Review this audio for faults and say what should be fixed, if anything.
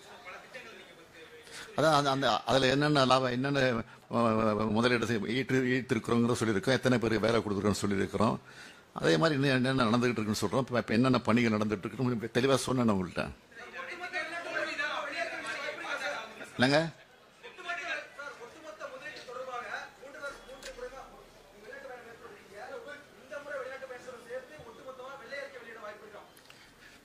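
Nothing to fix: no faults found anywhere in the clip.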